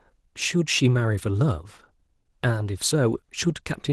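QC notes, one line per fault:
Throughout, Opus voice compression: a bitrate near 16 kbps starves the hybrid coder's excitation coding, so speech sounds coarse, hoarse and slightly robotic.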